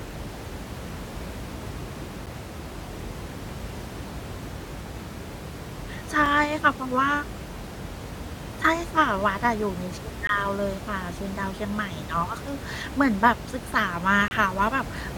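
At 2.26 s the speech drops out for about 8 ms, then again at 6.26 s for barely 4 ms, at 10.27 to 10.29 s for 20 ms, and at 14.28 to 14.31 s for nearly 29 ms. These are gaps between stream segments. The timestamps of consecutive chunks don't quite meet, so the player pads the hole with silence. Each one is a hard-edged tick through the speech, and the room noise, sitting about 11 dB under, cuts out with it. The steady 4-second spacing fits 4-second segments.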